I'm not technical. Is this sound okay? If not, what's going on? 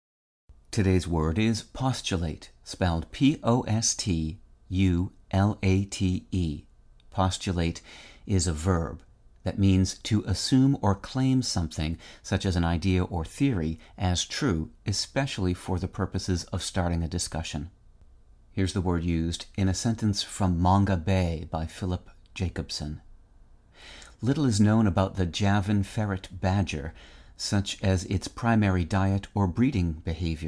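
Yes, it's fine: nothing in this recording of speech sounds broken or off, so there's nothing to worry about.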